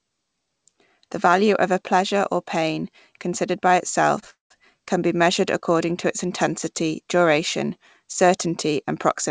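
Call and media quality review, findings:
Short stall from a late packet, 4.20–4.24 s: sound held roughly 23 ms too long with a faint buzz or dip. Jitter buffer ran dry, so the receiver stretched the preceding audio until the packet arrived, then resumed in place; nothing lost. Waveform: repeated copies of one cycle. Spectrogram: brief smeared, static harmonic band.

Call audio freeze, 4.30–4.52 s: sound trails into a fading buzz or hiss, then about 150 ms of silence, inserting a 0.2 s gap with nothing dropped. Likely packets delayed in transit emptied the jitter buffer. Waveform: decaying envelope to a flat line. Spectrogram: fading streaks, then a blank column under the 8 kHz codec ceiling.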